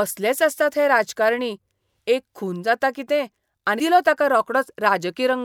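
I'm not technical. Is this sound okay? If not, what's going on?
No. At 3.78 s, just after "एक खून जाता कितें", compressed frames were skipped: roughly 150 ms of speech drops out and the audio jumps ahead.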